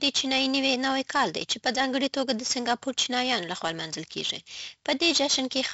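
Throughout the speech, heavy 4-bit ADPCM compression damage is audible. Each sample is coded as a coarse 4-bit step from a prediction, leaving gritty hiss on loud syllables and distortion on sharp onsets. Nothing reaches above 7.7 kHz, consistent with a 64 kbps stream.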